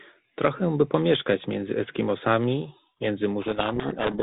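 At 3.42 s a codec payload misread sets in and runs to the end of the speech clip. The two ends disagree on the bit order inside each G.726 code word, so the decoder applies the wrong adaptive-prediction differences and the speech is buried in harsh, grinding distortion. Up to that point the G.726 ADPCM path at 32 kbit/s is audible as band-limited telephone sound with only light coding roughness.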